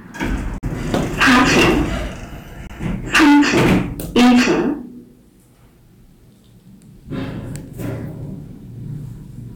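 A recording of everyday sounds with two kinds of fault. Two short silent holes open at 0.58 to 0.64 s and 2.67 to 2.71 s, losing about 46 ms and 23 ms. The edges are abrupt or fade over a few milliseconds. The sound then picks up further along, as if it had kept playing. This is likely a Bluetooth dropout, with late packets discarded. The gap lengths fit two lost frames and one lost frame. Hard clipping then adds harsh fuzz to the loud passages at 0.94 to 1.82 s, 3.15 to 3.78 s and 4.16 to 4.60 s. The signal there is overdriven by about 14 dB, 19 dB and 18 dB. Its peaks are cut flat, and the squared tops spray harmonics high into the spectrum.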